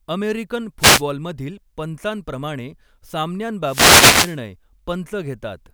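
A short swish of static cuts across the speech from 0.79 to 1.03 s, and a longer burst returns from 3.63 to 4.39 s, lasting about three-quarters of a second. Both are wireless microphone noise hits. The radio link from an analogue FM transmitter fades as reflected signals cancel the direct one, so the receiver's own noise rises over the weakened carrier until the signal recovers.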